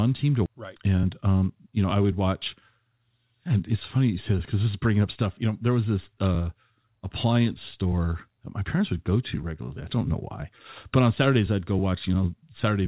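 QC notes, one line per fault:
0.46 s, skip ahead: about a second of audio is missing and playback jumps straight forward with no gap, as the jitter buffer discarded buffered audio to catch up.
0.80–2.57 s, jitter buffer speed-up: the sound runs about 13% fast at unchanged pitch, since the buffer trimmed short pitch-period pieces, roughly a fifth of a second in total, to reduce delay.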